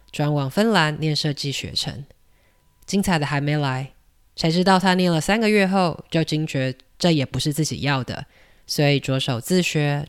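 No technical faults can be heard anywhere in the recording, with the speech signal holding steady throughout.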